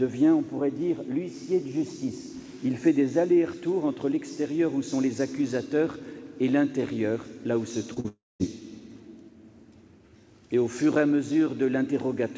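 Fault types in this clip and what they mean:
Short concealed packet loss: Tiny pieces of audio arrived too late for the decoder, and the receiver patched each gap by extending the sound just before it. This happens twice, at 7.94 s for about 20 ms and at 8.00 s for about 40 ms. Each patch runs slightly longer than the hole before easing back into real audio. It comes across as a quick smear or wobble.
Long network dropout: Straight after those patches, at 8.08 s, the last sound is drawn out as a fading buzz or hiss. It then gives way to roughly 0.2 s of silence, and audio returns at 8.42 s. About 0.32 s of material never plays, so the sound jumps ahead on resuming. The likely cause is a stretch where no packets reached the receiver at all, beyond what concealment could cover. This sits within G.722 call audio with nothing above 8 kHz.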